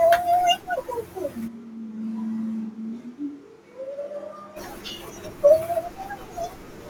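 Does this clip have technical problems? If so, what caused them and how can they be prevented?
Yes. From 1.49 to 4.55 s the speech turns abruptly hollow, roomy and thin, about 10 dB quieter, likely a switch to a distant microphone. Check the close microphone's connection and record a backup track so a dropout never forces the fallback.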